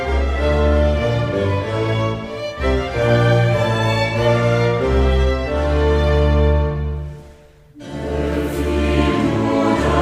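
No technical faults can be heard anywhere in this audio. There is nothing to place on the timeline.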